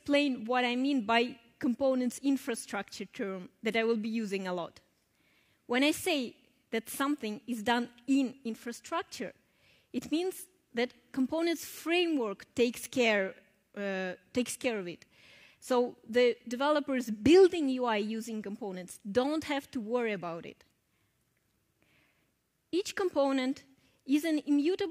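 Nothing in the audio stands out as a technical problem, so there's no fault to point to anywhere along the way.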